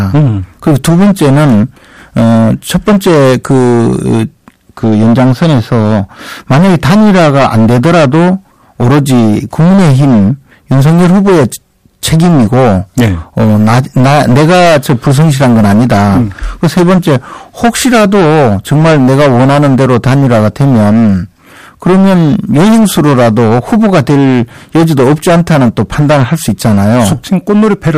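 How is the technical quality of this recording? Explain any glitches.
The recording is heavily distorted from start to finish by hard clipping. The speech is driven roughly 16 dB past what the signal path can carry, so the peaks are sliced off flat, and nearly a third of the samples were cut off at the clipping limit. Those squared-off tops create harmonics reaching high up the spectrum, heard as a constant harsh fuzz on every loud syllable. The waveform shows flat plateaus on the peaks, and the spectrogram shows bright, smeared energy extending upward.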